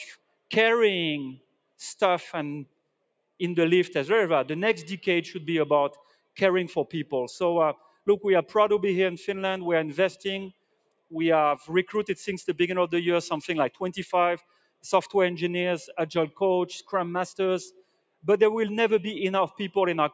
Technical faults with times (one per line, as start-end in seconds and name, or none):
0.00-20.13 noise suppressor applied to music or sounds
0.15-0.51 sound cut by the noise suppressor
1.38-1.80 sound cut by the noise suppressor
2.66-3.40 sound cut by the noise suppressor
5.95-6.38 sound cut by the noise suppressor
7.75-8.07 sound cut by the noise suppressor
10.52-11.13 sound cut by the noise suppressor
14.38-14.84 sound cut by the noise suppressor
17.70-18.24 sound cut by the noise suppressor